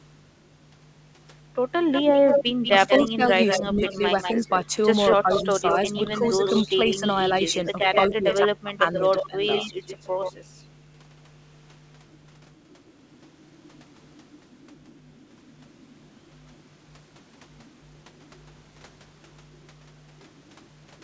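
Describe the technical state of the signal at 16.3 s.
At 16.3 s the speech signal is intact, with no dropout, glitch or other fault, just the normal sound of the call path, a G.722 codec whose band stops at 8 kHz.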